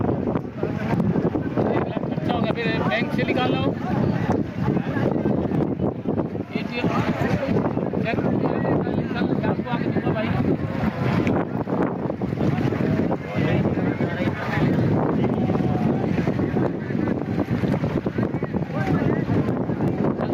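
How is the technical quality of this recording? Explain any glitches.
The recording suffers from gain pumping across its whole length. The input gain was likely set far too high, so a fast limiter or compressor keeps clamping down on every loud sound and releasing in the quieter stretches. The level swings by something like 15 dB as a result, leaving loud and soft passages squashed close together.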